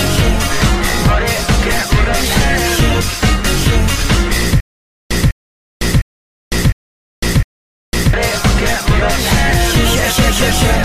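From 4.60 s to 8.13 s the audio falls into a stutter with silent gaps: the same short fragment, about 0.2 s long, plays five times, each followed by roughly 0.5 s of dead digital silence, so the burst recurs at a steady interval of about 0.71 s. The likely cause is a stalled player or stream replaying its last buffered fragment at each retry before running dry, and the sound that belonged in that stretch never arrives.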